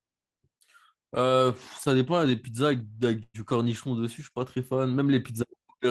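At 1.83 to 1.87 s a sound is held a fraction too long, with a faint buzzy edge where the speech should have moved on. This is a short stall from a late packet. The next packet had not arrived when it was due, so the jitter buffer ran dry and the receiver stretched the last sound by about 21 ms to cover the wait. When the packet arrived, playback resumed exactly where it left off. Nothing is lost, but everything after this point runs about 21 ms later.

From 3.23 to 3.36 s the speech freezes. The last sound turns into a fading buzz that drops to silence for about 30 ms before the speech picks up again from the same point. This is a call audio freeze, likely caused by packets being held up in transit and emptying the jitter buffer. The receiver filled about 112 ms with the decaying continuation and the short silence. None of the speech is missing, but this gap pushes the rest of the clip a further 112 ms later.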